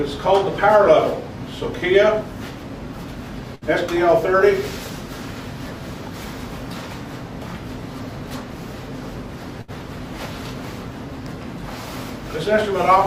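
At 3.55 s the last sound briefly carries on and fades for about 60 ms, then jumps ahead; the same thing happens at 9.61 s, lasting about 65 ms. Both are a burst of packet loss: several consecutive packets never arrived in time, so the receiver stretched the last sound it had, letting it decay, and then resumed about 60 ms further on, leaving that stretch of audio missing.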